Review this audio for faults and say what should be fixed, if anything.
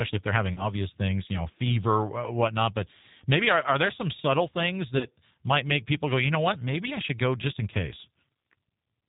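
Throughout, the speech carries G.729 codec damage that is plainly audible: a slightly rough, synthetic edge and nothing above 4 kHz. That fits an 8 kbit/s G.729 stream, which rebuilds each 10 ms frame from a vocal tract filter, a pitch predictor and a few pulses. It differs from a simple low-pass filter because the grain and buzz stay even in the band that remains. The fix is a wideband codec such as G.722 or Opus at a higher bitrate.

Twice there is VoIP packet loss concealed by the speech codec: from 0.54 to 0.73 s, after "if they're having" and before "things you know fever", and from 4.98 to 5.07 s, after "there some subtle things" and before "might make people go". Each gap fits a single lost packet of about 30 ms. The decoder stretches its last pitch and filter into a buzzy tone or coloured noise that fades, and the voice stays weak or distorted for a while after packets return because each frame builds on the last. 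Plain dropouts would be silent or clicky instead. Adding a jitter buffer, FEC or redundancy, or improving the network path, would prevent these.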